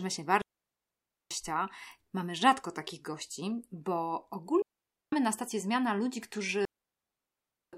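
Speech clip with three digital wireless dropouts, where the receiver mutes after losing too much data: 0.42 to 1.31 s (0.89 s), 4.62 to 5.13 s (0.51 s) just before "na stację zmiana ludzi", and 6.65 to 7.73 s (1.08 s) just after it. Each is a clean near-silent hole, with no noise burst at either edge.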